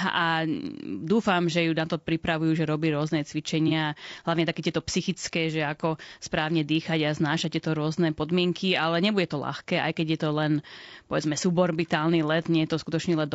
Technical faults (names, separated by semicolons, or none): low-delay AAC compression; AAC frame loss with concealment